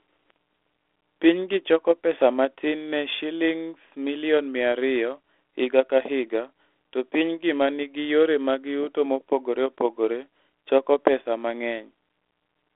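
A steady low drone at 60 Hz sits under the speech from start to finish, roughly 25 dB below it. This is mains hum: a ground loop or nearby transformer leaking the power line into the signal. It persists beneath the narrow telephone band, which stops below 3.8 kHz.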